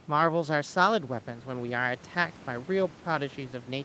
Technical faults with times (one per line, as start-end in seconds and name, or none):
none